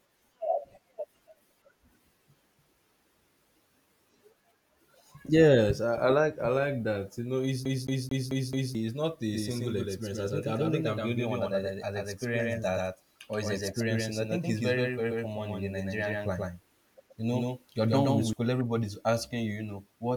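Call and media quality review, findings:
Rapid even stutter, 7.65–8.75 s, after "know it's", before "not a": one 0.22 s slice repeats five times, short mute at each jump. CD stuck on one turn: disc-read fault, laser thrown back a track every revolution.

Hard-edged second copy, 9.33–18.33 s, "not a" to "everybody's asking you you": full-band, dry, roughly equal level, roughly 150 ms late. Doubled audio track, likely from a slower parallel capture path mixed into the output.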